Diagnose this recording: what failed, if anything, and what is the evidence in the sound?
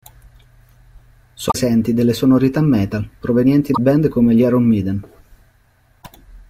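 Three brief glitches at 1.48–1.55 s (before "delle sonorità metal provenienti"), 3.71–3.79 s (before "band come gli") and 5.99–6.06 s reveal damaged data in the compressed stream: the codec misdecodes corrupt frames until it resyncs.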